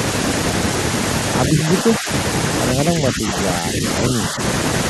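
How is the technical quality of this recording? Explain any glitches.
The speech repeatedly dips in level. At 1.49 to 2.09 s, 2.74 to 3.37 s, 3.58 to 3.83 s and 4.13 to 4.40 s, the speech sinks by up to about 10 dB in brief patches. This is likely speech suppressed in double talk: the echo canceller, unable to separate this talker from loudspeaker echo while both sides spoke, turned everything down.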